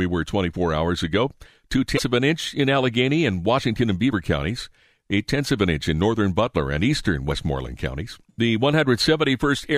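Damaged data in a compressed stream produces brief glitches at 1.95–1.99 s, just before "of an inch in", 4.09–4.13 s, and 7.28–7.32 s after "and eastern", as the decoder loses frame sync and searches for the next frame header.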